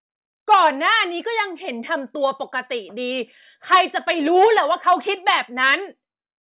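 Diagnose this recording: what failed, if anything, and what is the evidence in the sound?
Nothing in the speech recording points to a failure at any stage of the chain, so there is nothing to diagnose.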